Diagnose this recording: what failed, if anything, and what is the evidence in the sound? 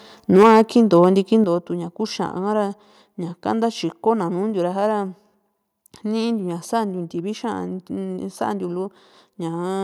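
Microphone overload, at the converter stage: from 0.34 to 1.08 s the loudest syllables take on a harsh, crackly edge, with peaks flattened against the converter's limit and a few percent of samples clipped there. The input was driving about 8 dB past the converter's limit, so waveform tops are sheared off. The distortion tracks the loudest moments and stays put rather than smearing or warbling, which separates it from codec artefacts. Likely cause: input gain set too high for this talker.

Microphone volume stepped down, in call processing acting on the device's input gain: at 0.43 s the level drops by about 4 dB, and at 1.44 s by about 7 dB. Each change is instant, and the background falls together with the voice. A compressor or automatic gain control would ramp the level over many milliseconds and recover, but these are clean steps that stay down. The first lands inside the overloaded passage, which points to software reacting to the clipping peaks.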